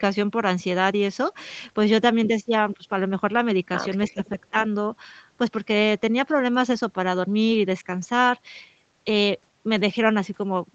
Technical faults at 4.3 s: speech suppressed in double talk

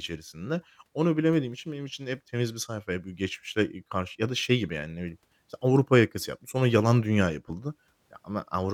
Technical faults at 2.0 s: none

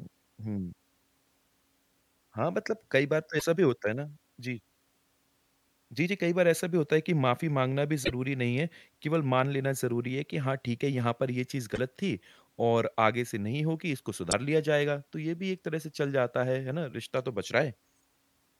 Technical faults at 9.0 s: none

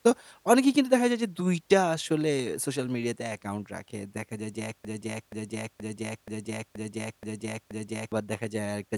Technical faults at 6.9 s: broken-record loop

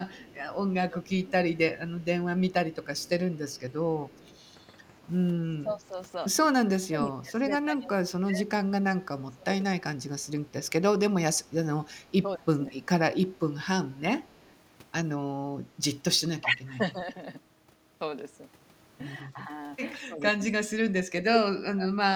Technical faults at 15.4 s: none

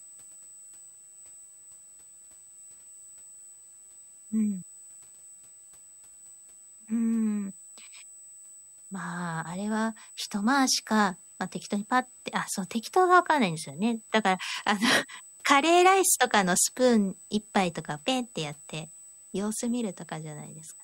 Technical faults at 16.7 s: USB whine

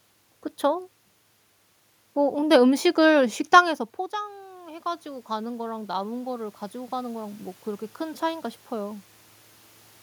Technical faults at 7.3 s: automatic gain rising

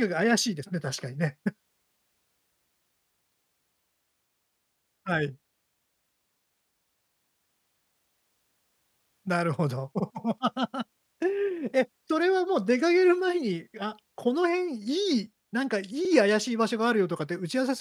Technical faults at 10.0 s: overlapping chunks

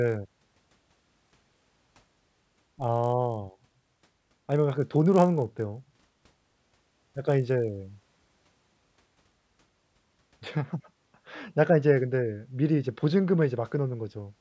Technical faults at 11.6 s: none

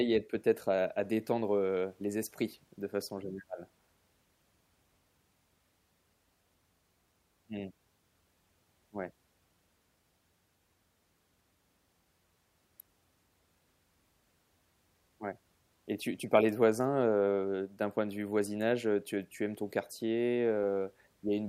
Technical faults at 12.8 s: electrical switching spike

